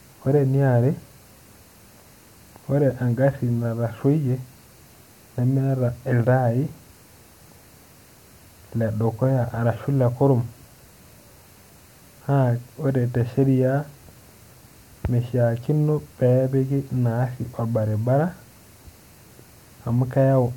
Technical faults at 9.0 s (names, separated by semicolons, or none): none